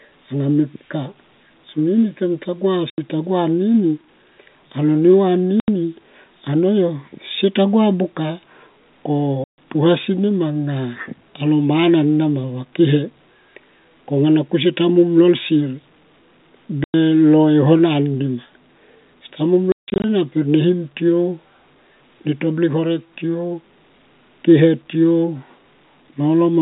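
Packet loss filled with silence cuts hard-edged gaps at 2.90 s, 5.60 s, 9.44 s and 16.84 s (80 to 140 ms, which fits 20 ms packets), then after "seta muom" at 19.72 s scatters 240 ms of dropouts across 320 ms over the narrowband telephone line.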